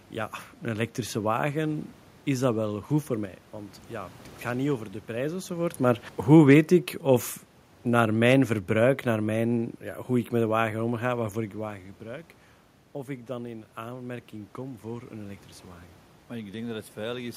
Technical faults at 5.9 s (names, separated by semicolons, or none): sudden gain jump; automatic gain falling